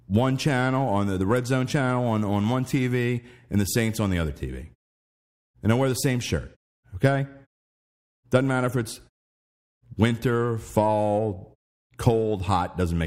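No technical faults are audible in this speech.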